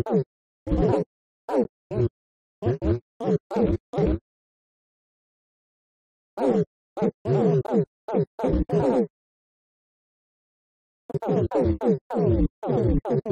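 At 1.64 s and again at 7.67 s, a gap between stream segments leaves a hard-edged hole of silence, about 13 and 17 ms long, six seconds apart, consistent with a 6 s segment boundary. Unlike a dropout, no audio is missing; the silence is inserted and the sound resumes intact.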